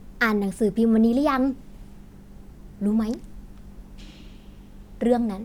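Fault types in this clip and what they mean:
Nothing to flag here: no faults turn up anywhere in this bit of speech.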